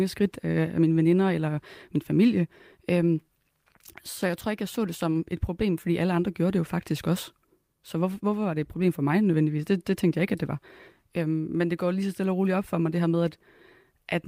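No technical faults can be heard anywhere in this speech recording.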